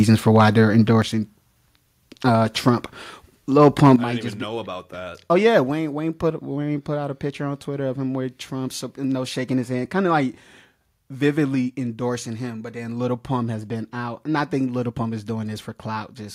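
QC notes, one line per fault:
0.11–0.49 s microphone overload: speech peaks are flattened with a harsh, crackly edge, likely from input gain driving the converter about 5 dB past full scale, clipping a small fraction of samples.
1.02 s microphone volume stepped down: speech and background drop together by 6 dB in one abrupt step, likely the call software cutting the mic's input volume after the preceding distortion.
3.61–3.93 s microphone overload: denser crackle just before "I might just be", likely input level about 4 dB over the converter's limit, with a few percent of samples squared off.
3.96 s microphone volume stepped down: a sudden 8 dB fall in level right before "I might just be", likely an automatic input-gain cut reacting to the clipped burst just before it.
11.55 s microphone volume stepped down: a small 2 dB step down in overall level just before "endorsing him but then", likely a further one-step reduction of the mic's input volume.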